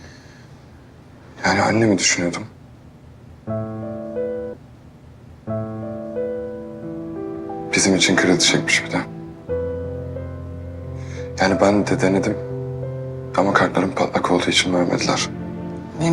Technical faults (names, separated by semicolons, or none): stream segment repeated